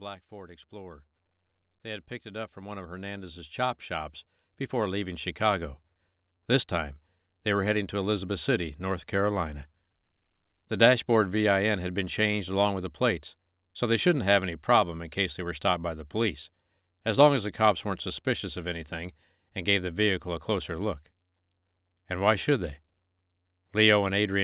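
From 0.29 s to 7.01 s the speech and the background swell together, climbing about 17 dB before "they were heading to". This is automatic gain rising: the gain control judged the input too quiet and slowly raised it, within call audio that stops at 4 kHz.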